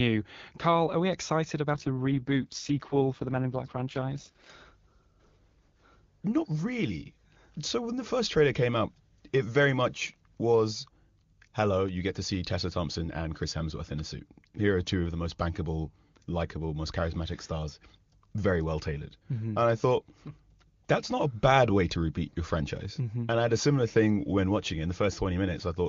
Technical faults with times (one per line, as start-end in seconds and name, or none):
1.74-4.50 AMR rate drop